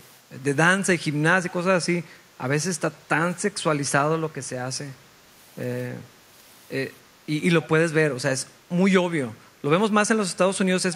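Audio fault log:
1.49 to 1.53 s and 7.62 to 7.68 s, echo leak: a faint, clipped copy of the speech comes back 288 ms late, about 30 dB below the speech the first time and a little stronger, about 25 dB below, the second, likely from a far-end echo canceller letting some loudspeaker pickup return.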